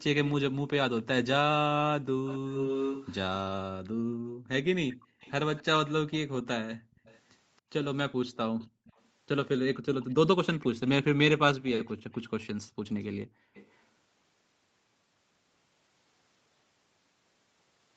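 From 0.24 to 3.15 s an echo leak is heard: a distinct copy of the speech trailing it by 274 ms and nearly as loud as the original. The likely cause is a far-end loudspeaker whose echo canceller let its own playback back into the microphone. A fixed, separate repeat sets it apart from room reverberation, which smears rather than repeats.

From 3.86 to 5.2 s the background is gated by the echo canceller. It pulls the microphone down hard while the loudspeaker plays, so the room sound drops by about 40 dB. Unlike a packet dropout, only the background vanishes.

The echo leak returns from 5.2 to 13.84 s, again 274 ms behind, but far fainter. Shorter gating dips in the background occur at 6.78–6.95 s, 8.68–8.85 s and 13.25–13.54 s, each close to 40 dB deep.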